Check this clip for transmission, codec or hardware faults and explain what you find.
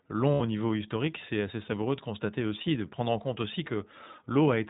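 Two faults are present: iLBC codec coding throughout and a short burst of lost iLBC frames.

iLBC codec, throughout: the speech is band-limited to 4 kHz, and each frame's excitation is coded on its own; the audio has a plainly audible rough, slightly synthetic texture. This fits the 15.2 kbps mode with 20 ms frames.

Lost iLBC frames, 0.34 to 0.41 s: packets went missing, and the decoder filled the gap by repeating the last pitch cycle blended with noise. This is heard as a brief held, buzzy vowel lasting about 60 ms, which fits three lost 20 ms frames. Because iLBC frames stand alone, normal speech resumes immediately afterwards.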